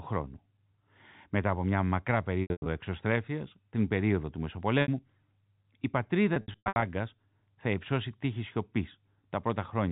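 Packet loss with pitch repetition hits three times: 2.42–2.66 s after "από μια μακρά", then 4.82–4.88 s after "εξωστρέφειας την περίοδο του", then 6.34–6.82 s. Missing chunks get patched by looping the last pitch period, so you hear a brief held buzz fading out before the narrowband telephone sound resumes.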